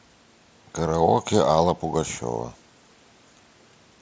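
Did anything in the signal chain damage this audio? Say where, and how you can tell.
No, no damaging fault found.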